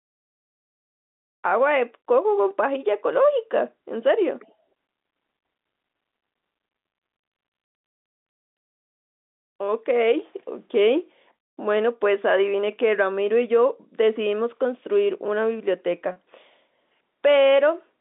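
Speech heard over a telephone-band line, with sound confined to roughly 200 Hz to 3.7 kHz as G.711 coding allows, carries one instance of packet loss with pitch repetition at 16.12 to 16.16 s. About 40 ms of audio, consistent with two lost 20 ms packets, is bridged by repeating the last pitch period, so the sound briefly holds with a slight buzz. A plain dropout would leave silence or a click instead of that sustained, buzzy hold.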